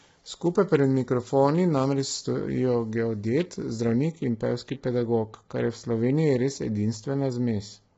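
From 0 to 4.12 s, pre-emphasis left on: the treble was boosted before recording or transmission and the matching de-emphasis was never applied, which fits a 50 µs FM curve. The top end stands about 11 dB above 1 kHz, so the speech sounds thin, bright and sharply sibilant until it eases at 4.12 s.

Throughout the clip, the speech was likely squeezed through low-delay AAC compression of the AAC-ELD type at a low rate, consistent with around 16 kbps. Heavy damage leaves the voice rough and grainy, noise fills between harmonics, and nothing survives above 7.8 kHz.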